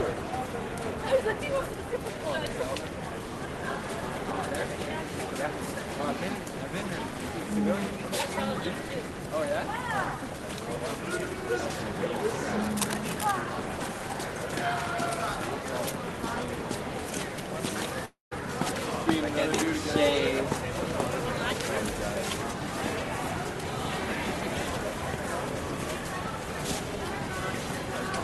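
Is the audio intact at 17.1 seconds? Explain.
Yes, at 17.1 seconds the audio is intact, with no dropout, glitch or other fault at that moment.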